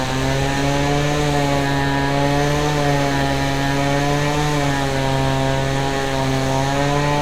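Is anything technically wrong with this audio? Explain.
No, there's nothing technically wrong here; it's just a recording of sounds, and nothing in it trips up the ear.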